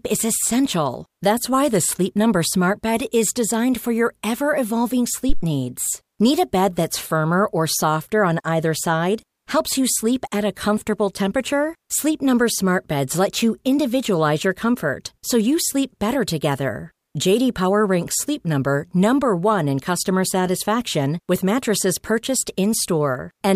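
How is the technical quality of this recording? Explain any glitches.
One technical fault stands out: a phantom power thump at 5.29 s, running to about 5.41 s, just after "for your ever evolving". A supply voltage was switched on or off on a live input, and that sudden step passed through the coupling capacitors as a low-frequency pulse. It sounds like a deep, dull thud peaking around -5 dBFS, dying away over roughly 27 ms. On a waveform it appears as a large one-sided swing with a quick tail. On a spectrogram it is a short bright smear concentrated at the bottom of the frequency range.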